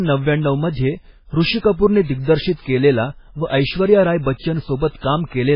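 Throughout, the speech sounds watery and swirly. Nothing is heard above 5.2 kHz, so s sounds lose their edge. This is likely heavy MP3 compression. The damage fits a very low bitrate, around 16 kbps. Weak frequency lines flicker on and off between frames.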